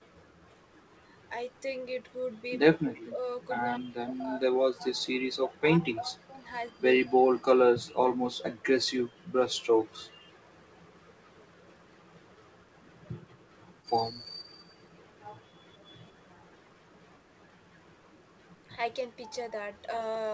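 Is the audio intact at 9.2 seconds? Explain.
No. From 9.15 to 9.19 s the speech drops sharply, by around 20 dB, for about 40 ms, then recovers. This is likely speech suppressed in double talk: the echo canceller, unable to separate the talker from loudspeaker echo, turned both down.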